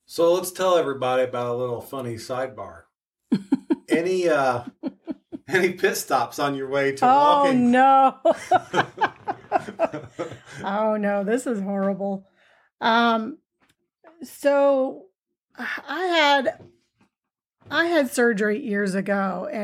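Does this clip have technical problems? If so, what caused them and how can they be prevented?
No, nothing in this speech recording points to a technical fault. Since no problem can be heard, there is nothing here that calls for prevention.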